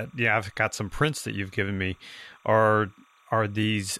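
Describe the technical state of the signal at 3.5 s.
At 3.5 s, as across the whole clip, timecode bleed is present: 30-frame linear timecode leaks into the speech path, adding a faint chirping warble near 1 and 2 kHz roughly 35 dB down.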